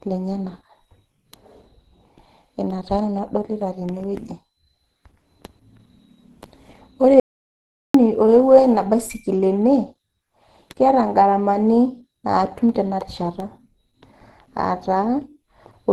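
Throughout, the speech shows Opus compression, likely at a low rate near 16 kbps. Nothing sounds above 12 kHz, and the muffled, hoarse graininess fits the hybrid speech mode.

From 7.20 s to 7.94 s, an audio dropout to silence cuts the speech off for about 0.75 s. The input was likely lost while recording continued, leaving silence with no room tone.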